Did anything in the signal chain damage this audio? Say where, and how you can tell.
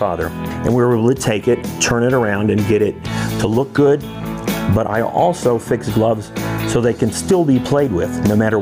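Yes. Gain pumping runs through the whole clip, with the gain swinging by around 15 dB. Loud and soft passages sit unnaturally close in level, and everything sounds squashed. The likely cause is input gain set far too high at the microphone stage, with a fast limiter or compressor clamping down on every peak. A noise gate would cut the background to silence instead of letting it breathe back up.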